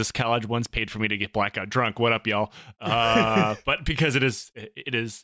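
Nothing stood out on listening to this speech recording.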